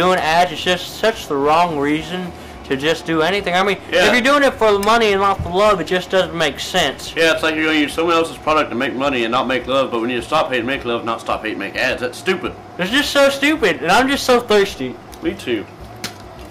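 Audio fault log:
No faults found in this clip; nothing to log.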